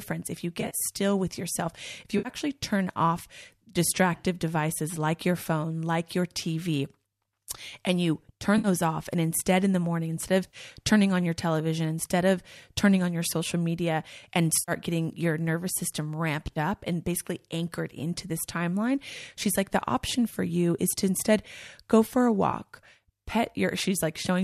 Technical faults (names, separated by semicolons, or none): AAC frame loss with concealment